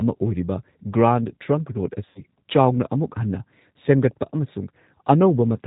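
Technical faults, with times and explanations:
Throughout: G.729 codec. The speech is rebuilt from a vocal tract filter, a pitch predictor and a few pulses per frame, so it sounds rough and synthetic with nothing above 4 kHz. This coarse pulse texture, rather than a clean band limit, points to G.729A at 8 kbit/s.
2.09 to 2.21 s: VoIP packet loss concealed by the speech codec. About 60 ms of audio is missing, which fits six 10 ms frames. The decoder repeats its last pitch and filter with falling gain, giving a buzzy tone or coloured noise that fades rather than silence or a click, and the speech stays weak briefly afterwards.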